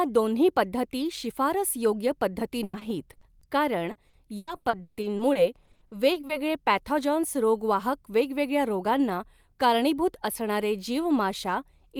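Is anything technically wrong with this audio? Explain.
Yes. Repeated packet loss (robotic sound) from 2.63 to 3.43 s and again from 3.91 to 6.31 s: lost packets are patched by stretching the previous sound, giving choppy speech, with repeated smeared horizontal bands on a spectrogram.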